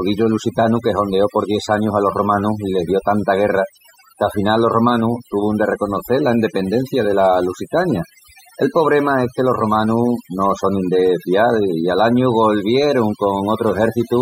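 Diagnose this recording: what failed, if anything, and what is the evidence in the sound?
Overdone noise removal runs through the whole speech recording, a call-processing or post-production fault. Between phrases the background drops, dotted with twinkling, chirpy specks. The suppressor was set far too aggressively. It pulls individual frequency bands down or out whenever they sit close to its noise estimate. Stray bands that briefly rise above the estimate become the specks, and the quieter parts of the voice are stripped away along with the noise.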